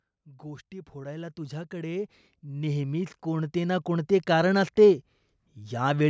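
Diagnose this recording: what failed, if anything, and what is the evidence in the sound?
Automatic gain rising, in the call processing stage. From 0.24 s to 4.66 s, speech and background noise swell together by about 16 dB as the gain control, judging the input too quiet, ramps up. The waveform envelope widens steadily, and a spectrogram brightens evenly across every band.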